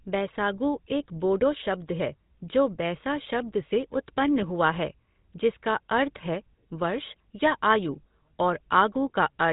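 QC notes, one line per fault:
Throughout, GSM full-rate codec: the speech has passed through a coder that models the vocal tract and excites it with sparse, evenly spaced pulses, cutting everything above 3.8 kHz. The result is a plainly audible buzzy, gravelly roughness over a muffled top end, which fits the 13 kbps full-rate coder.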